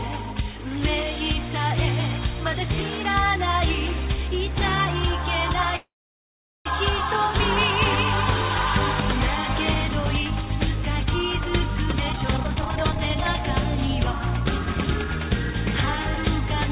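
At 5.76 s the sound stalls in a call audio freeze, likely from delayed packets emptying the jitter buffer. A brief fading tail gives way to silence, about 0.78 s of flat waveform and a blank spectrogram, before the audio resumes at 6.67 s with nothing lost.

From 11.92 s to 15.27 s a jitter buffer speed-up plays the audio at 127% speed and unchanged pitch, trimming roughly a second to shed the built-up delay. It sounds hurried. On a spectrogram, events crowd closer together while the harmonic spacing holds, all below the 4 kHz ceiling.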